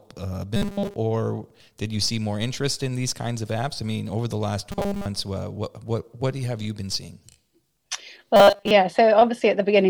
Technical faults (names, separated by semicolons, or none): robotic sound from repeated short buffers